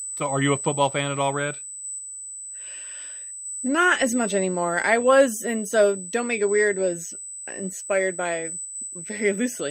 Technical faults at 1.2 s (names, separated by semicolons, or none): USB whine